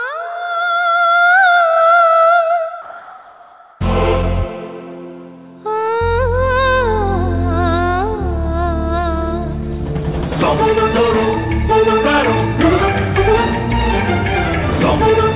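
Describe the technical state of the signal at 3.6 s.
At 3.6 s the background is a flat, featureless hiss, about 1 dB quieter (2.82 to 3.8 s), likely comfort noise in place of the background, synthesised while transmission paused.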